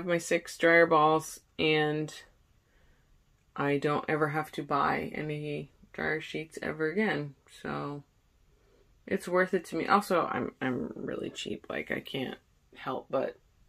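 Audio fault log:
No faults found anywhere in this clip.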